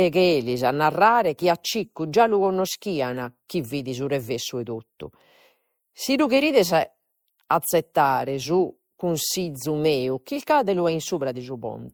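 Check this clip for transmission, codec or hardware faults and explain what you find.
Transcoding between lossy codecs runs through the whole speech clip. The likely cause is that the speech was encoded to MP3, then decoded and re-encoded with Opus. This points to a moderate MP3 rate, around 96 kbit/s, followed by Opus near 48 kbit/s. The second encoder spent its bits reproducing the first one's artefacts as if they were real signal, then added its own. Both codecs' traces can be heard together. Content reaches up to about 20.2 kHz, so the chain kept the top of the band.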